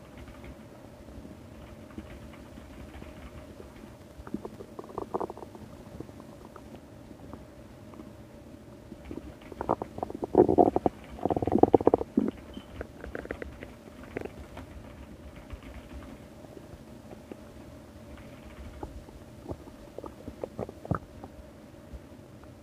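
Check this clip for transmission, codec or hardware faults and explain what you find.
Two bursts of processor overload crackle appear, from 3.88 to 4.56 s and from 14.20 to 14.67 s. The processor could not fill each tiny buffer in time. The sound points to buffers under a millisecond long, with a dozen or more misses in a row. Each miss replayed a scrap of old audio with hard edges. The result is a gritty, tearing crackle riding on the sound. It stops once the load eases.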